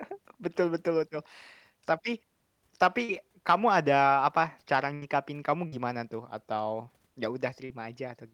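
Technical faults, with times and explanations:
3.05 to 3.10 s, 5.68 to 5.73 s and 7.66 to 7.70 s, short concealed packet loss: In each case about 30 to 40 ms of the call arrived too late for the decoder, so the receiver invented a stand-in by extending the preceding sound, following its pitch where it was voiced and using shaped noise where not, before crossfading into the real signal again. Each hole is heard as a brief smear or wobble, the middle one just before "gimana tuh", and a short consonant can disappear.
4.95 to 5.03 s, burst of packet loss: Here about 70 ms went missing in one stretch, too long to patch cleanly. The receiver kept repeating the last sound while lowering its level as the gap lasted, so a voiced sound becomes a held, dimming buzz and anything else a fading hiss. When real audio returns, it picks up 70 ms further on, and whatever fell inside that span is simply gone.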